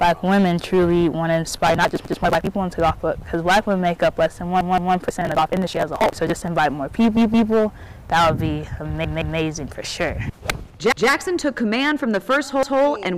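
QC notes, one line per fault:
Throughout, hard clipping: the sound is driven about 16 dB past full scale, so around one sample in twenty hits the ceiling and its peaks are sheared flat. Those flat tops add a dense series of high harmonics, heard as a harsh fuzz on every loud moment. On the waveform the peaks are squared off against both rails. The spectrogram shows broadband energy smeared up toward the top of the band wherever the level is high.
1.65–2.47 s and 5.09–6.48 s, processor overload crackle: the processing fell behind and missed its deadlines many times in a row, on blocks of roughly 10 ms. The first burst loses dozens of them and the second around a hundred. Each missed block is simply skipped, so the audio jumps forward with a hard edge. The rapid run of jumps gives a gritty, tearing crackle that stops as soon as the load eases. The waveform shows dense discontinuities, and the spectrogram shows a cluster of thin vertical broadband lines.
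2.05–2.22 s, 4.61–4.95 s, 7.17–7.51 s, 9.05–9.39 s, 10.92–11.09 s and 12.63–12.80 s, repeated buffer: new audio arrived late, so the last 0.17 s block was played again. That length fits an 8192-sample buffer. It plays once more at 2.05, 10.92 and 12.63 s, and twice more at the other three points, which gives an audible stutter of identical segments. The waveform shows copied blocks butted together with a step at each join. On the spectrogram the pattern repeats exactly, with a vertical click line at every seam.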